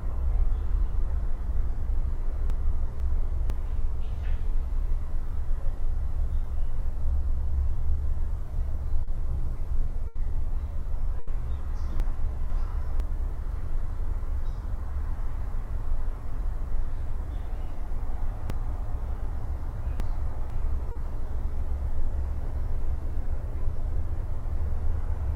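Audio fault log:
2.5–3.5 s, 12.0–13.0 s and 18.5–20.5 s: chunks out of order. In the first two spans a 500 ms chunk arrives one chunk late, so the two halves of each second play swapped. At 18.5 s the chunk is three chunks late and plays only after the next 1.5 s. No audio is lost, but each reordering leaves three hard joins, heard as a jumbled, out-of-sequence passage.
9.03–9.10 s and 20.91–20.98 s: short concealed packet loss. About 40 ms of audio failed to reach the decoder in time at each point. The receiver bridged the hole by extending the preceding sound, following its pitch where it was tonal and using shaped noise where it wasn't, then crossfaded back into the real signal. The result is a brief smear or wobble in place of the missing instant.
10.07–10.18 s and 11.19–11.30 s: burst of packet loss. Each time about 80 ms of consecutive packets were lost or arrived too late to play. 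Concealment carried the last sound forward and faded it as the gap lengthened, so a pitched sound turns into a held buzz and a noisy one into a dying hiss. Playback then resumes further along, and the stretch in between is gone.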